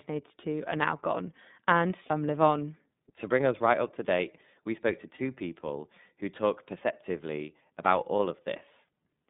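Throughout, the speech passes through the iLBC codec, coding each 30 ms frame independently. The 150 Hz to 3.7 kHz band is narrow, and the plainly audible rough, synthetic edge fits the 13.33 kbps mode. At 2.06 s and again at 5.16 s, lost iLBC frames made the decoder repeat the last pitch cycle mixed with noise. Each gap of about 30 ms, which fits a single lost frame, sounds like a brief buzzy held vowel before the voice recovers at once.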